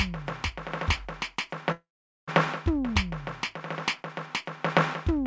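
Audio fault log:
1.72–2.30 s, call audio freeze: the music stalls, the last sound carries on briefly as a fading buzz, then about 0.43 s of silence, likely from delayed packets draining the jitter buffer. Playback resumes where it stopped, so nothing is lost, and everything after plays about 0.56 s later.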